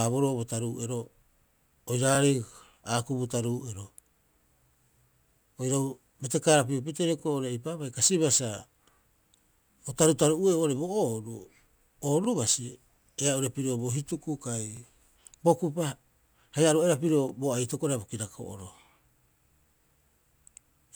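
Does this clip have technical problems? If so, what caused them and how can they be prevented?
Yes. Overlapping chunks produce a brief stutter at 4.68, 7.20, 9.72, 12.25, 14.77, 17.29 and 19.81 s. The speech was processed in 2.5 s chunks, each starting 23 ms before the previous one ended, so that 23 ms slice plays twice at every join. Prevention: set the chunk hop equal to the chunk length, or crossfade and trim any intended overlap before concatenating.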